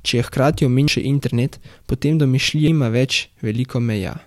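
At 0.88 s and again at 2.68 s the speech jumps ahead, losing about a fifth of a second each time. That's likely audio missing between chunks, with roughly 2-second chunks.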